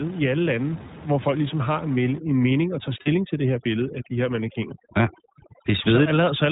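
Throughout, the speech carries the sound of the iLBC codec. Nothing reaches above 4 kHz, and the voice has a slightly rough, synthetic edge that fits 20 ms frames at about 15 kbps. On a spectrogram, energy stops at a hard ceiling near 4 kHz for the whole clip.

From 2.18 s to the end, overdone noise removal takes over. The room noise, which sat about 17 dB below the speech before this point, is pushed down, leaving twinkling specks. Quieter parts of the voice are cut along with it. A spectrogram shows a near-black background scattered with isolated dots, and holes punched into the speech bands.

Between 3.02 and 3.08 s, lost iLBC frames leave a short gap. The decoder fills roughly 40 ms by repeating the last pitch cycle mixed with noise, which sounds like a brief held, buzzy vowel. Speech returns almost at once afterwards. The waveform shows a short stretch of near-identical repeated cycles.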